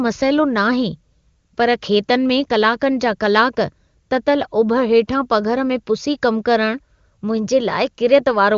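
No technical faults are audible.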